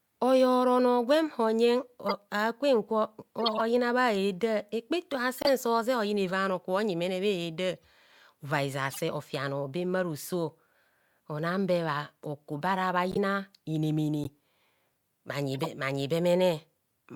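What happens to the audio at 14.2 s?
At 14.24 to 14.27 s a corrupt frame is decoded. Damaged bits in a couple of compressed frames were played anyway, so misread gains put energy at wrong frequencies. It comes through as a brief chirp or blip, peaking around -20 dBFS.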